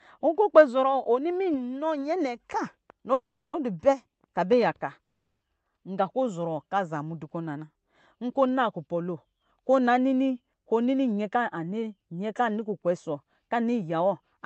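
Packets were most likely held up in transit, emptying the jitter buffer and causing a call audio freeze at 3.13 to 3.56 s and again at 5.04 to 5.44 s. Each time the receiver stretched the last bit of speech into a short fading buzz, then fell silent for roughly a third of a second before the speech resumed exactly where it had stopped. The result is a gap of about 400 ms and then 370 ms, with nothing dropped.

From 11.11 s to 14.39 s the buffer had built up more delay than it wanted, so a jitter buffer speed-up trimmed it by cutting many tiny pitch-period slices out of the speech. Together these remove about a third of a second. The speech plays roughly 8 percent faster at unchanged pitch and sounds rushed to the end.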